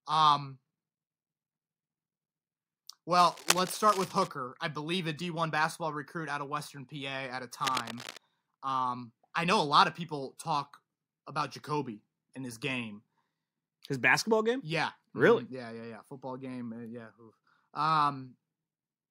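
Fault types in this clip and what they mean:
Cable scratch noise: Dense, ragged scratching and rustling sits over the speech from 3.19 to 4.32 s, nearly as loud as the speech itself, then returns more faintly, about 10 dB below it, from 7.60 to 8.17 s. The uneven bursts are likely caused by a worn cable, connector or control being moved, so that its contact resistance jumps about rapidly and injects irregular noise straight into the signal.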